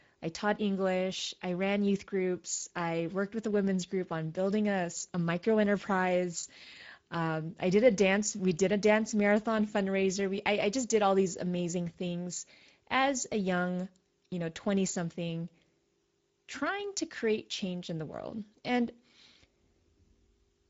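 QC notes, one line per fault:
Throughout: Speex codec. The speech has plainly audible CELP damage: a rough, grainy edge where the excitation is modelled coarsely. Nothing is left above 7.7 kHz, and the overall texture fits a wideband Speex mode at roughly 17 kbps.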